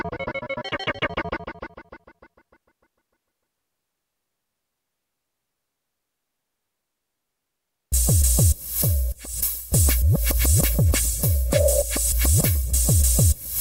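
No technical faults can be heard in the audio.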